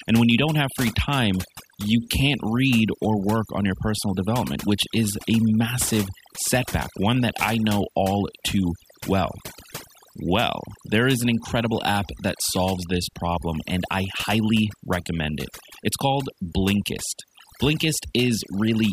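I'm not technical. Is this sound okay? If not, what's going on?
No. All the way through, the quiet gaps between phrases drop to near silence with twinkling specks. This is overdone noise removal: a cleanup tool set too strongly, cutting away quiet parts of the voice along with the background noise.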